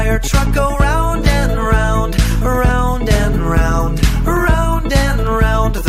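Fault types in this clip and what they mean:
Dropped samples: Two sharp, isolated clicks, at 4.37 and 5.27 s, each a thin vertical line across the spectrum. The likely cause is a tiny fraction of a millisecond of missing samples, so the waveform jumps abruptly without any audible gap in the sound.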